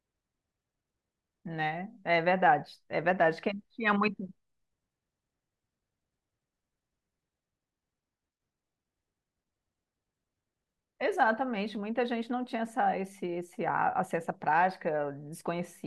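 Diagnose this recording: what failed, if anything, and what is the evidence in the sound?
Nothing failed here as far as I can hear: the speech comes across steadily all the way, with no audible break, glitch or damage at any stage of the chain.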